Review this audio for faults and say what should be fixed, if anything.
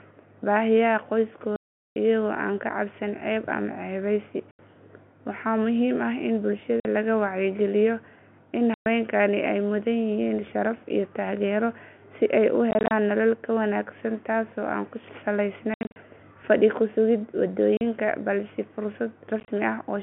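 Packet loss filled with silence: the receiver got no audio for runs of packets and played silence instead. That leaves hard-edged holes at 1.56–1.96 s (400 ms), 4.51–4.59, 6.80–6.85, 8.74–8.86, 12.71–12.91 (scattered, between "taageero si ay u" and "nolol ka wanaagsan taasoo"), 15.74–15.96 (scattered), 17.77–17.81 and 19.40–19.48 s. The gap lengths fit 10 ms packets. Enabling packet loss concealment and a jitter buffer with forward error correction would hide these gaps.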